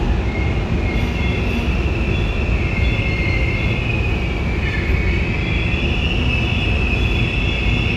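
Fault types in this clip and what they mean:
No faults are audible anywhere in this recording of sounds.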